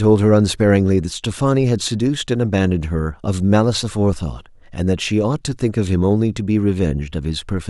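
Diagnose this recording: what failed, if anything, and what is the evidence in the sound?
Listening to the speech recording, nothing stood out that would point to a failure at any stage of the chain.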